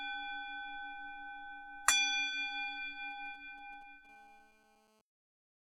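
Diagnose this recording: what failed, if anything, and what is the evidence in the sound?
GSM signalling bursts got into the analogue wiring between 3.11 and 4.07 s. The sound is a galloping dit-dit-dit of brief buzzes, roughly 30 dB under the signal. Inside each group the buzz repeats at about 217 Hz. That rate is the fingerprint of a nearby 2G handset sending short radio bursts while it signals the network. An unshielded or unbalanced input stage rectifies the RF, and the detected envelope lands in the audio.

A GSM phone buzz follows from 4.09 to 5.01 s. This one is a steady, raspy tone at about 217 Hz with a dense stack of harmonics. It sits about 32 dB below the signal and has no relation to it. The steadiness shows the handset has moved into a call and is transmitting in bursts 217 times a second. The stage is again the analogue input wiring. It demodulates the pulsed carrier into a square-ish buzz, which gives the tone its hard, harmonic-rich edge.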